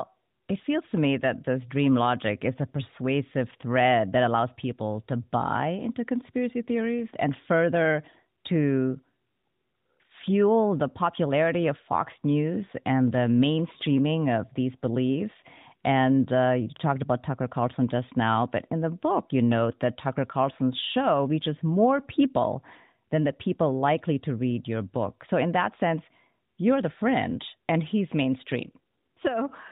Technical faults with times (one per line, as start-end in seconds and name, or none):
none